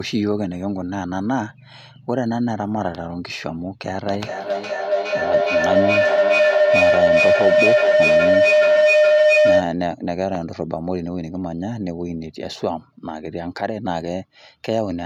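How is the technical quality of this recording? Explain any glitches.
The recording has one serious glitch: a feedback howl from 4.06 to 9.86 s. A microphone-to-loudspeaker loop gains level each pass, so repeats roughly every 400 ms swell into a tone near 700 Hz, peaking about 8 dB above the speech. A spectrogram shows a bright horizontal band that narrows and brightens; the waveform balloons in amplitude.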